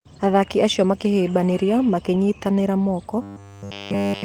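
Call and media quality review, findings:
Robotic sound from repeated short buffers, 3.22 s to end of clip. Rigid metallic buzz locked at 100 Hz, which fits a 10 ms segment looped continuously with no fresh audio getting through. Likely a receive-side buffer underrun in the playout path. Unlike packet-loss concealment, the pitch stays fixed rather than smoothing over gaps.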